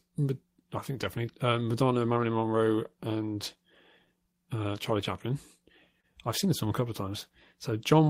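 Small, uneven hiccups run through this speech clip from about 0.12 s to 8.06 s, giving the delivery a faintly unsteady tempo. Each hiccup is a slight stutter where a fragment of sound is doubled. These are repeated timing corrections. Across the stretch the receiver keeps inserting repeated pieces, always in the same direction, so playback runs at about 98% speed and gains roughly 150 ms in total. The insertions are scattered irregularly rather than evenly spaced, so they come across as a wobble in rhythm rather than a steady slowdown. The underlying cause is clock drift between sender and receiver. The sender's audio clock runs about 2% slow relative to the receiver's, so audio arrives a little more slowly than it is played out. As the jitter buffer drains, the receiver pads it by repeating short pieces to keep pace. Because the buffer runs lean throughout, it can also run empty outright. 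That is what happens at 6.01 to 6.05 s, where a brief sound is held too long and carries a slight buzz or dip. This is a short stall from a late packet. A packet had not arrived when it was due, so the receiver stretched the last sound for 27 ms until it came in, then resumed from the same point. Nothing is lost, and the stall adds 27 ms of delay.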